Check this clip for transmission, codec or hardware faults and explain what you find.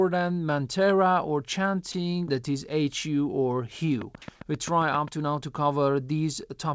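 Two faults turn up in the speech, one short dropout and a run of clicks, on a call path whose audio stops at 8 kHz, as you'd expect from G.722.

At 1.92 s, right after "mantra or" and before "that is", about 20 ms of speech is dropped by the voice detector. The sender likely judged that quiet stretch to be background and stopped sending. The receiver filled it with comfort noise, so you hear a tiny flat patch.

From 4.02 to 5.09 s, just before "to now to", there's a train of clicks, about ten at a steady 7.5 per second, peaking about 5 dB above the speech. Likely interference or a struggling interface injecting the same pulse over and over, heard as regular ticking.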